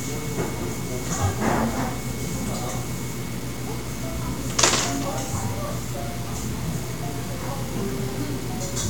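From start to finish the sound carries a grainy distortion that tracks its level, with quiet passages turning gritty. The likely cause is low bit depth without dither: truncation to about 6 bits, leaving signal-following error only about 15 dB down.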